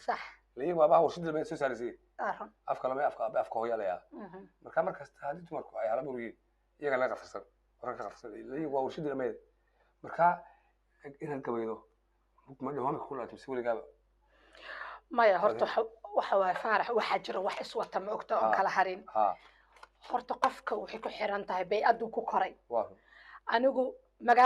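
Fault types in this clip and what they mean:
noise suppressor applied to music or sounds: A suppressor built for speech stays active through the whole clip, treating sustained tones and ambience as noise, so the level keeps swinging by around 5 dB. The waveform envelope pumps, and the spectrogram shows held energy and decays fading unevenly behind intact onsets.
sound cut by the noise suppressor: Seven stretches between 0.35 s and 24.21 s where steady or decaying sound is pulled down by about 9 to 12 dB while sharp attacks pass. On a waveform these appear as sudden dips, and on a spectrogram as dark gaps where sustained bands thin out.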